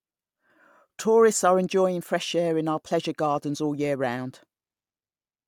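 No technical faults are audible in this speech recording.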